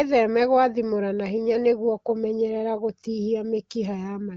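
No faults detected; the speech is carried over AMR wideband (HD Voice) at 15.85 kbit/s, a rate at which it stays clear, with only light coding texture.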